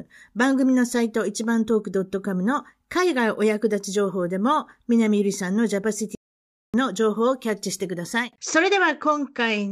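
A playback stall interrupts this speech clip at 6.15 s, cutting the sound mid-flow into silence for about 590 ms until 6.74 s, when it resumes. The likely cause is the player starving for data or its thread being blocked, so output simply halted until recovery.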